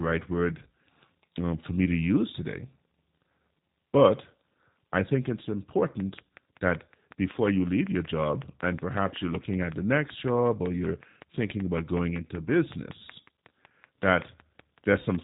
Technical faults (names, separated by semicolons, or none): G.729 codec; train of clicks